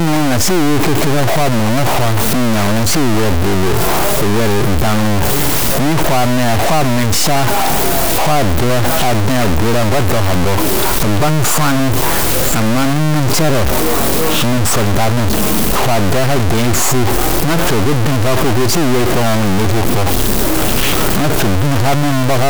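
A stuck bit runs through the whole speech clip, from start to finish. One of the sample's data bits appears held at a fixed value, likely from a broken data line or a failing converter, so roughly half the samples jump by a large step of about -10 dBFS. The result is a harsh, buzzy distortion riding on the speech, and because the bit flips with the sign of quiet samples, the pauses fill with loud, gritty noise.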